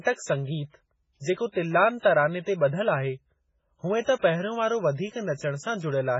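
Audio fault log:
throughout MP3 compression: the speech has nothing above 7.6 kHz and a heavy watery, swirling quality, with s sounds turned metallic and chirpy and consonant attacks smeared. This is likely MP3 encoding starved of bits, which fits a rate near 16 kbps. The encoder cuts the treble at a fixed point and drops weak frequency lines, which flicker on and off between frames. A spectrogram shows a flat ceiling at 7.6 kHz and speckled, patchy holes below it.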